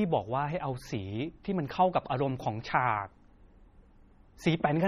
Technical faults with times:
0.00-4.87 MP3 compression

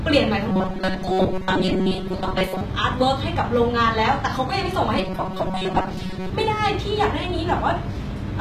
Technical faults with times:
0.00-8.40 HE-AAC compression
0.51-2.62 robotic sound from repeated short buffers
4.99-6.30 robotic sound from repeated short buffers

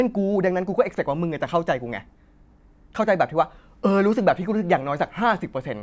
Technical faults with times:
none

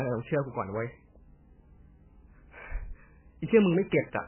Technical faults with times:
0.00-4.28 MP3 compression

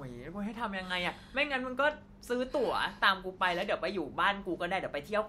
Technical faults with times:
none

